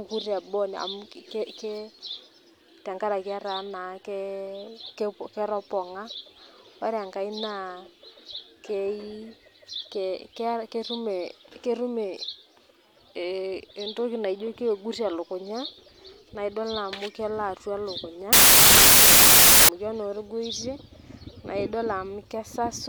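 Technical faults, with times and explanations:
18.33 to 19.69 s, samples built from the wrong bytes: for about 1.4 s the speech gives way to loud, harsh broadband noise, because each sample is being assembled from misordered or misaligned bytes, so the rapidly changing low bits land in the high-order position. On the waveform the trace jumps to dense random fill; the spectrogram shows a flat, bright wash across all frequencies.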